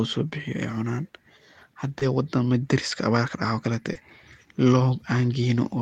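At 1.99 to 2.03 s and again at 3.93 to 3.97 s the speech shows short concealed packet loss. In each case about 20 ms of audio failed to arrive in time, and the receiver synthesised a replacement by extending the preceding sound, following its pitch where voiced and using shaped noise where not, before crossfading back into the real signal. Each gap is heard as a brief smear or wobble in the speech.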